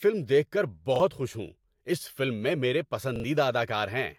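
A speech clip with two brief stutters: at 0.96 s a tiny slice sounds twice with a hard join, and at 3.16 to 3.24 s, right after "میں میرے", a slice repeats three times in a row. This is a repeated buffer. When fresh audio failed to arrive in time, the device replayed its last 40 ms block, once and then twice, losing roughly 40 ms and 70 ms of sound.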